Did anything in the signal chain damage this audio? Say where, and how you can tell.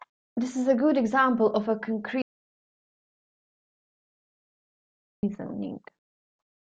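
Yes. Right after "good example of a", at 2.22 s, the speech drops straight into dead silence and only comes back at 5.23 s, so about 3.01 s of the take is gone. It's an audio dropout to silence: no room tone or noise floor in the gap, just silence. That points upstream of the recorder, most likely a lost input link or a momentary mute, while the recorder or encoder kept writing silence.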